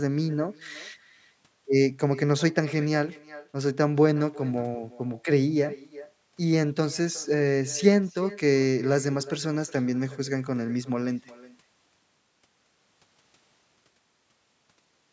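All the way through, there's echo with no canceller: the far end's speaker leaks back into its mic, returning the speech roughly 0.4 s later at about 19 dB down, thin.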